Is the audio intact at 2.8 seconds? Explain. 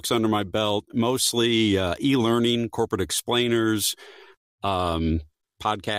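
Yes, at 2.8 seconds the speech runs through intact, with no dropout, click, distortion or other technical fault at that point.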